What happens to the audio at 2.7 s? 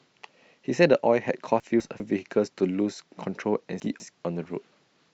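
Nothing goes wrong at 2.7 s; the speech plays through that moment intact, with no dropout, click or distortion.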